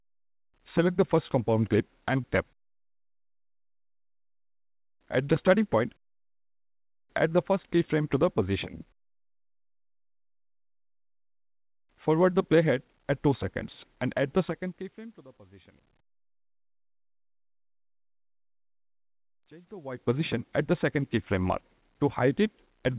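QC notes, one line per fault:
2.24–2.26 s, skip ahead: playback jumps forward abruptly, with no silence or fill at the join. About 0.7 s of audio is simply missing, because audio that had already queued behind it was played instead and the delay shrank by roughly that much. On a spectrogram this appears as a sharp vertical seam where patterns on either side fail to continue. The waveform shows a hard discontinuity with no gap.
2.44–7.25 s, jitter buffer speed-up: after the jump, the receiver still held more buffered audio than it wanted. It trimmed short pitch-period-sized slices again and again, so the sound runs about 106% fast at unchanged pitch and feels hurried. Roughly a third of a second is removed in total. On the spectrogram, harmonics keep their frequencies within the 4 kHz band of the call path while events crowd closer in time. The waveform shows periodic cycles quietly shortened at many small splices.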